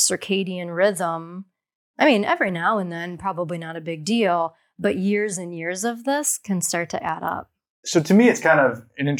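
From 0.19 to 7.09 s there's a click every 2.3 s, likely clock drift buffer slips: mismatched clocks, roughly 150 ppm apart, dropping or repeating a small block of samples.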